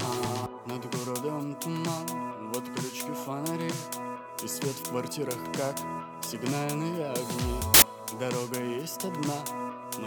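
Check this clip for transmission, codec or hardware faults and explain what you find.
One fault is present. Samples built from the wrong bytes appear from 7.74 to 7.82 s: for those 80 ms the decoder misassembles each sample's bytes, so rapidly fluctuating low-order bits land in the high-order positions, producing a short burst of loud, harsh broadband noise over the sound.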